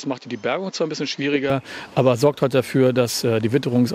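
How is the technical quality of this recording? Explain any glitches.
The recording has one clear fault at the start. From 0.0 to 1.5 s, the sound is duller and somewhat quieter, with a faint added noise floor. Nothing is present above 7.6 kHz. This is likely an input switched to a poorer device, one with narrower bandwidth, lower gain and its own hiss. The change back is immediate, with no gap.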